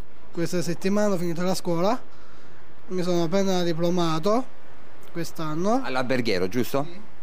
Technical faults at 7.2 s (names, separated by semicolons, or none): DC offset